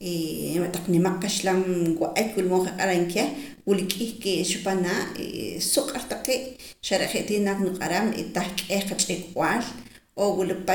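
No technical faults are audible anywhere in the speech recording.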